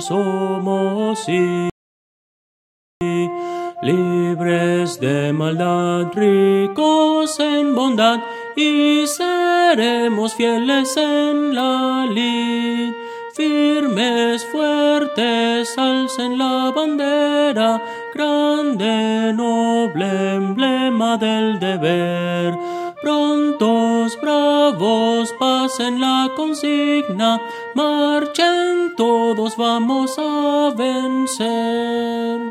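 At 1.70 s the player exhausted its store of downloaded audio and had to halt playback until more data came in, a rebuffering stall. The sound drops abruptly into silence and stays there until 3.01 s, then picks up from the exact point where it broke off. None of the material is skipped or repeated; the stall simply inserts about 1.31 s of dead air, stretching the timeline by that amount.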